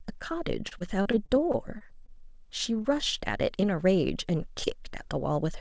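From 0.68 to 2.10 s, repeated packet loss (robotic sound) sets in: roughly ten stretches of the speech arrive too late or not at all, the longest about 34 ms, and each is patched by extending the preceding sound. About 13% of that span is synthetic fill, giving a choppy, robotic quality with pieces of the speech missing.

Two short concealed packet losses follow, at 2.82 to 2.86 s and 3.60 to 3.64 s. Each time, about 20 ms of audio fails to reach the decoder, so the receiver continues the last sound and blends back in, heard as a brief smear or wobble.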